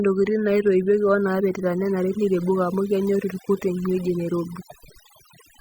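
Overdone noise removal runs through the whole speech recording: an overly aggressive noise reducer has pulled individual frequency bands down or out wherever they sat near its noise estimate. Quieter parts of the voice went with them, and the background drops to near silence broken by twinkling specks. A spectrogram shows isolated bright flecks scattered across an otherwise empty floor.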